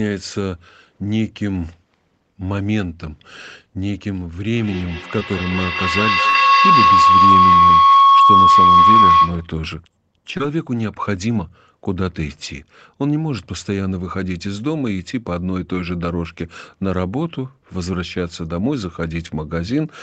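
From 4.5 to 9.58 s a ringing tone near 1 kHz swells until it sits about 9 dB above the speech, pulsing roughly five times a second. This is feedback howl: two devices in the same room share the call, so each trip from loudspeaker to microphone and back comes out louder than the last. The loop keeps strengthening the frequency it favours, and the pulse follows its round-trip delay of about a fifth of a second.

Inside that stretch, at 5.19 to 5.22 s, there is a brief smear where the audio seems to stall and then slides back in. This is short concealed packet loss. About 10 ms of audio never reached the decoder in time, so the receiver extended the preceding sound to cover the gap and blended back into the real signal. The same kind of smear returns at 10.37 to 10.40 s, where about 20 ms were lost, and at 15.75 to 15.77 s and 19.27 to 19.29 s, each about 10 ms.

At 6.30 to 6.35 s the sound freezes into a short held sound that fades away, and the speech resumes slightly further along. 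This is a burst of packet loss. About 50 ms of consecutive audio were lost or arrived too late to play. The receiver stretched the last sound and faded it over the gap, so whatever was in those 50 ms is missing.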